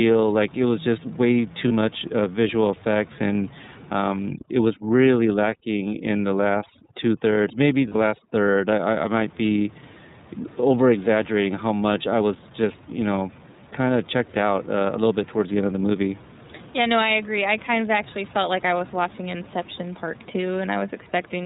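Throughout, the speech is band-limited, with nothing above 4 kHz, and has a plainly audible rough, slightly synthetic edge. That is the iLBC codec, a narrowband VoIP coder that codes each frame's excitation independently. The damage level fits its 30 ms frame mode at about 13.3 kbps. The room noise, sitting about 23 dB below the speech, passes through this coarse coding along with everything else.

At 1.68 to 1.71 s, one 30 ms frame is lost, heard as a brief held, faintly buzzy vowel-like patch. These are lost iLBC frames. The decoder fills the hole by repeating the last pitch cycle mixed with noise. Since each iLBC frame stands alone, the speech is correct again right after.

From 4.29 to 8.93 s, the background drops and breaks up into twinkling specks, and the speech loses its quieter parts. This is overdone noise removal. A noise reduction stage set too strong cuts any frequency band that falls near its noise estimate, removing real low-level speech detail together with the room noise.

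Inside that stretch, at 7.89 to 7.96 s, two consecutive frames (60 ms) are lost. The concealment again produces a held, breathy-buzzy vowel.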